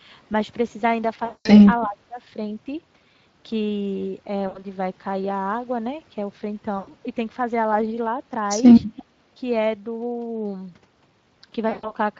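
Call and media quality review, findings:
Call and media quality review, findings:

Speex codec, throughout: hoarse, noisy speech with a coarse upper band, consistent with a mid-rate setting near 20 kbps. The excitation is too coarsely coded to carry clean voicing.

VoIP packet loss concealed by the speech codec, at 1.25–1.50 s, 4.47–4.65 s, 6.77–6.92 s and 11.69–11.94 s: stretched buzzy tone or coloured noise fading out. The decoder extrapolates pitch and filter across gaps of 200, 80, 100 and 140 ms, and recovery lags afterward.

Speech suppressed in double talk, 1.84–2.19 s: talker dips by about 20 dB for under half a second. The likely cause is the echo canceller attenuating during simultaneous talk.

Echo leak, 8.96–9.03 s: brief faint copy of the voice 338 ms late, roughly 30 dB down. The likely cause is residual loudspeaker echo that far-end cancellation failed to remove.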